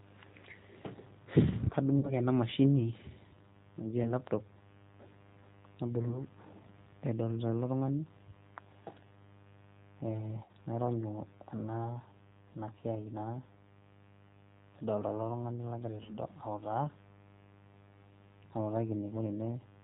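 Right from the start there's a mains buzz sitting under the speech, a raspy 50 Hz buzz about 25 dB below the talker. It's not a clean hum; something like a dimmer, rectifier or poor shielding is letting sharp spikes in twice per mains cycle, so the harmonics stack up into the kilohertz range and give it that gritty edge. It runs the whole length of the clip.

Also present throughout is the sound of the G.729 codec, and the damage is plainly audible. The top end stops at 4 kHz, and the speech has that slightly rough, synthetic quality you get when a decoder rebuilds the voice from a vocal tract filter, a pitch predictor and a few pulses per frame. This is the 8 kbit/s G.729A variant. The mains buzz suffers too, because a model built for speech doesn't reproduce a steady buzz cleanly.

Then there are five spots of VoIP packet loss concealed by the speech codec, at 1.99–2.13 s, 4.03–4.13 s, 6.08–6.19 s, 10.44–10.52 s and 16.03–16.12 s. 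The decoder papers over each gap by stretching its last pitch and filter state and fading the gain, so you hear a brief buzzy tone or coloured noise that fades. The gaps at 4.03 and 6.08 s sound like a single 20 ms packet, and the other three like 40 ms, two packets' worth. Because each frame builds on the one before it, the speech stays a bit weak and off for a moment after each gap ends.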